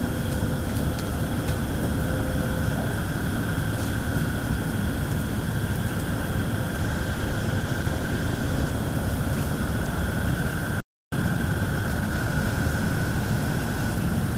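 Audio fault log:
6.81–8.81 s, call bitrate drop: The encoder's rate falls from 32 to 15 kbps, lowest for about 1.9 s. Coarser coding makes the sound rough and dull.
10.80–11.12 s, playback stall: The sound cuts out for about 0.32 s. The player likely ran out of data, so output went silent until it recovered.
11.12–12.38 s, time-compressed catch-up: The audio runs at 1.25 times speed at normal pitch. Small pieces are cut and cross-faded to clear the backlog.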